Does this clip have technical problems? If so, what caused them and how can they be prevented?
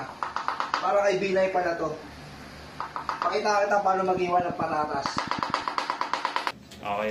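Yes. From 4.17 to 5.51 s a train of clicks ticks over the sound at a regular pace of about 9 per second, roughly fifteen pulses in all, each peaking about 10 dB above the surrounding audio. The likely cause is electrical interference or a faulty connection or power supply injecting the same short pulse repeatedly. A waveform shows evenly spaced spikes, and a spectrogram shows thin vertical broadband lines. Shielding cables and fixing or replacing the faulty connection or power supply would prevent it.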